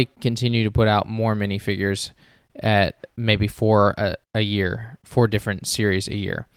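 No technical faults can be heard anywhere in this speech recording. There is nothing to describe at any point in the audio.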